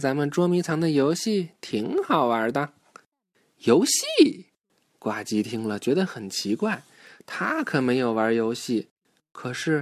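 Nothing stood out as a technical fault when listening to this speech recording.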